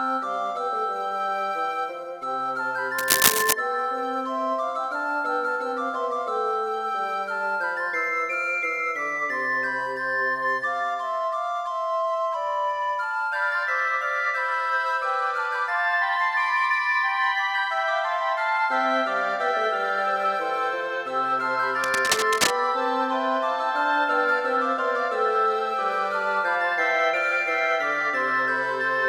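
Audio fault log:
2.98–3.53 s and 21.84–22.51 s, cable scratch noise: dense, uneven bursts of scratching and rustling sit over the sound, the first a little louder than the signal itself and the second roughly level with it. The likely cause is a worn cable, connector or control being moved, so its contact resistance jumps rapidly. On a spectrogram each burst is a broadband, ragged smear. On the waveform it appears as spiky, irregular hash riding on the audio.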